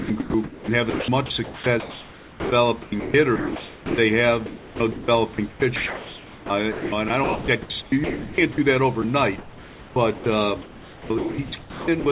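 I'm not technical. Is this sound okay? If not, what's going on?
No. The main problem is sound chopped by the voice detector, heard from 0.0 to 2.52 s, 2.82 to 3.98 s, 4.46 to 5.08 s, 5.34 to 8.58 s, 9.38 to 10.26 s and 10.62 to 12.06 s. In each stretch the speech keeps cutting in and out, with soft hiss filling the gaps. The likely cause is the sender's call software switching off whenever the voice goes quiet, such as soft syllables or word endings, and sending fake background noise instead.

There is also one brief instance of sound dropped by the voice detector, at 9.02 s. It is a tiny blip where a sliver of speech vanishes and a moment of steady hiss takes its place before the voice returns. This is likely the same detector briefly deciding the speech was background and pausing transmission for about 20 ms.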